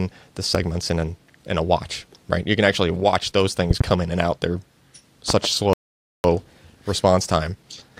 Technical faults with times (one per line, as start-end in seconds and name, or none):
0.55-0.58 loud pop
3.71-3.83 loud pop
5.30-5.47 loud pop
5.73-6.24 playback stall
6.24-7.99 time-compressed catch-up